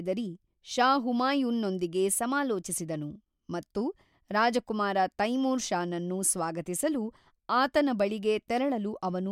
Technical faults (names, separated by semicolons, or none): none